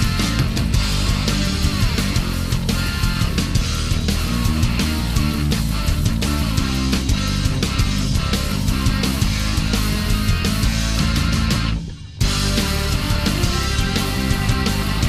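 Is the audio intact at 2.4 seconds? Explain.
Yes, at 2.4 seconds the audio plays through without any dropout, glitch, distortion or other fault.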